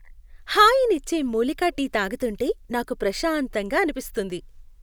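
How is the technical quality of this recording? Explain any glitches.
The technical quality of this recording is good, and there are no glitches to explain.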